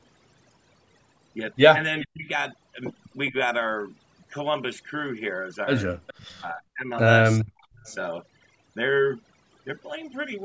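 Throughout the speech, overdone noise removal leaves the background at near silence dotted with brief twinkling specks. The suppressor pushed individual frequency bands down or out wherever they came close to its noise estimate, taking quieter parts of the speech along with the noise. On a spectrogram, the gaps between words look almost black with scattered isolated dots. Speech harmonics appear ragged and broken up. Nothing shows above 8 kHz, which is the normal upper limit of the call's microphone path.

Faint delayed copies of the voice appear at 2.01 to 2.07 s, 3.27 to 3.31 s, 6.07 to 6.37 s, 7.39 to 7.45 s and 7.80 to 7.95 s. This is likely an echo leak, where a loudspeaker echo got past the far side's echo canceller and was sent back. Each copy trails the voice by 408 to 416 ms and sits roughly 25 to 35 dB below it. On a spectrogram, each one is a weak, thin shadow of earlier speech patterns displaced by about 0.41 s.

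Right after three of these leaks, the talker's level drops sharply, at 2.05 to 2.29 s, 6.36 to 6.91 s and 7.45 to 7.81 s. The voice dips, dulls or breaks into pieces for about 0.2 to 0.4 s at a time. This points to speech suppressed in double talk. With both sides talking at once, the canceller could not tell its own talker from the echo and turned both down. The waveform shows sudden notches in the envelope, roughly 25 to 40 dB deep, and the spectrogram shows the speech energy fading out during those spans.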